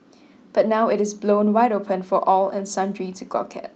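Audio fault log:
No faults heard anywhere in this speech recording.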